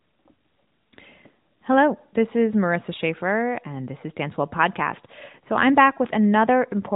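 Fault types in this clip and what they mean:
No faults are present in this recording.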